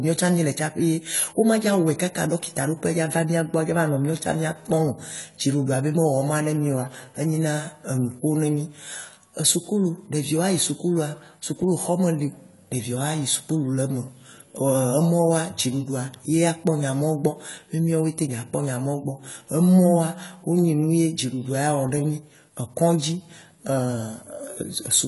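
Throughout the speech the sound is dull and smeared, with plainly audible damage. The likely cause is AAC compression, with AAC-LC at a low bitrate near 32 kbps. A spectrogram shows a flat ceiling at 11.5 kHz, with nothing above.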